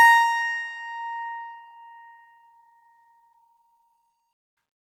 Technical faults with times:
none

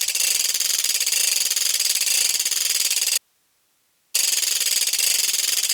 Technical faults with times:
3.18-4.14 audio dropout to a faint residue

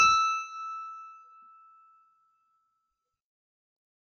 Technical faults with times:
0.00-4.03 low-delay AAC compression

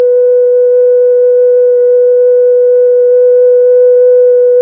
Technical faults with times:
none

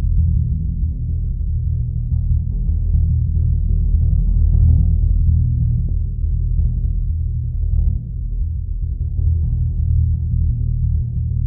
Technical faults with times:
5.88 damaged data in a compressed stream

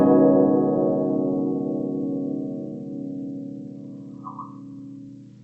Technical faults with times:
none

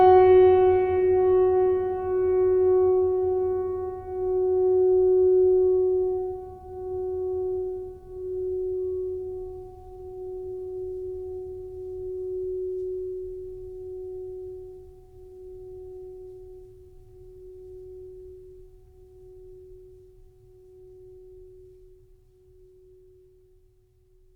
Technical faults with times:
none

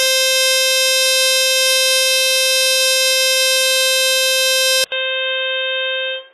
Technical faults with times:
0.00-6.33 HE-AAC compression
4.84-6.33 input switched to a poorer device

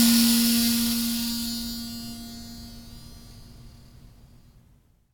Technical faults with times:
none

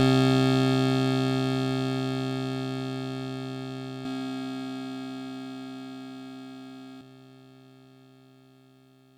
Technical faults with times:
4.05-7.01 doubled audio track

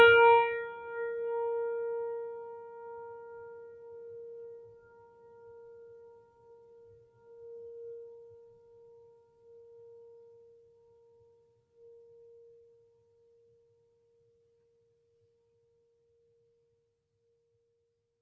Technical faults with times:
0.00-18.22 noise suppressor applied to music or sounds

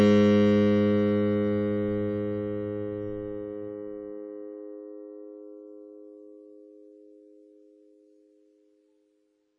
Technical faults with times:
0.00-9.58 WMA compression

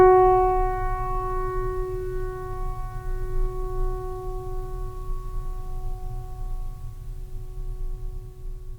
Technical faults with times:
none

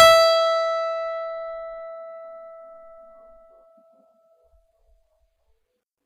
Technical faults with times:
0.00-6.05 HE-AAC compression

